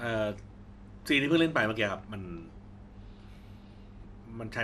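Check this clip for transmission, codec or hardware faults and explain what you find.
One fault runs through the whole clip: the speech sounds dull and plainly gurgling, with a grainy roughness and nothing above 13.6 kHz. That is the signature of MP2 compression, likely from encoding at a low bitrate, consistent with roughly 80 kbps. MPEG Layer II divides the spectrum into 32 sub-bands and rations bits among them. Starved of bits, the upper bands go silent, bands flicker on and off, and the remaining bands are coarsely quantised, giving the granular texture heard here.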